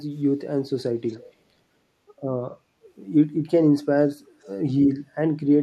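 From 1.07 to 1.33 s and again at 4.42 s there's an echo leak: a faint copy arriving 272 ms late, likely from a far-end canceller letting loudspeaker pickup slip through.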